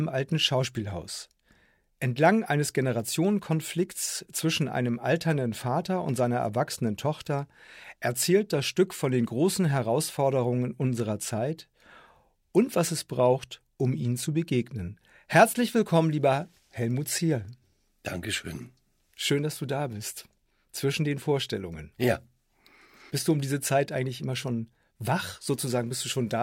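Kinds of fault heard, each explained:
No technical fault can be heard anywhere in this audio. There is nothing here to name or explain.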